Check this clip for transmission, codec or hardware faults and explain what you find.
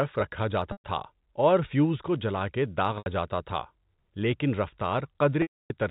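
Packet loss with pitch repetition occurs three times, over a G.711 telephone channel. At 0.72 to 0.84 s, just before "تھا اور فیوز کو", about 120 ms is lost. Another 80 ms goes at 2.98 to 3.06 s, right after "فیوز کو جلا کے". The longest, 280 ms, falls at 5.42 to 5.70 s. The receiver loops the last pitch cycle to cover each gap, which fits 20 ms packets. The shorter gaps sound like a held, buzzy tone, while the longest fades to silence before the sound cross-fades back. A plain dropout would cut straight to silence or a click, with no sustained periodic buzz.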